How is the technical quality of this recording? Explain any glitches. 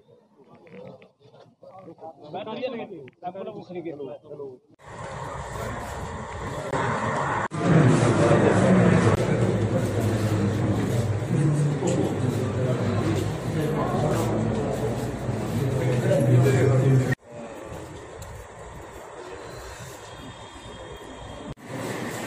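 The recording has one clear fault. From 6.71 to 9.17 s, the audio turns duller and narrower. Nothing is heard above 11 kHz. A brief gap of about 20 ms marks the change. The level shifts by a few decibels, and a faint new noise floor appears, well below the signal. The likely cause is an input switched to a poorer device. That device passes a narrower band and adds its own tone and noise. At 9.17 s, the fuller sound returns.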